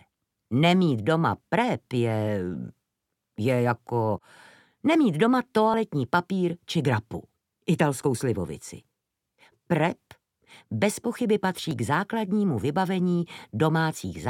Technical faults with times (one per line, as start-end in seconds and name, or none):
5.74 overlap between stream segments
11.71 overlap between stream segments